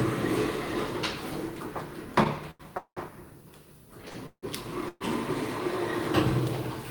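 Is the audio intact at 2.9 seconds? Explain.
No, 2.9 s sits inside a call audio freeze from 2.78 to 2.99 s. The last sound stretches into a fading buzz that drops to about 80 ms of silence, likely from delayed packets draining the jitter buffer. Playback then resumes 190 ms late with nothing lost.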